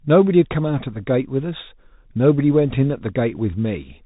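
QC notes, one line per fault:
Throughout: Bluetooth CVSD headset codec. The speech has gone through the narrowband headset link, which codes each sample as a single up-or-down bit with an adapting step size, a scheme that points to a 64 kbps CVSD stream. Nothing above about 3.8 kHz survives, so the speech sounds boxed and dull. The damage is plainly audible: loud bright passages outrun the step and distort, sibilants turn scratchy, and a granular hiss sits underneath.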